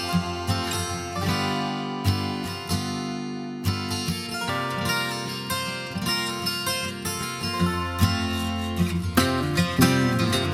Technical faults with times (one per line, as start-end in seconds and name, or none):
none